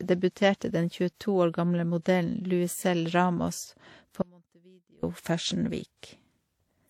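Throughout the speech there is a layered, smeared quality with a dulled top end, consistent with transcoding between lossy codecs. The combination points to a WMA encode at around 64 kbit/s that was likely re-encoded as HE-AAC at about 48 kbit/s, so both sets of artefacts sit together.

From 4.22 s to 5.03 s the signal drops abruptly for about 0.81 s, leaving only a faint trace roughly 30 dB below normal level before it returns just as suddenly. This audio dropout to a faint residue likely comes from a break in the feed while the downstream path stayed live.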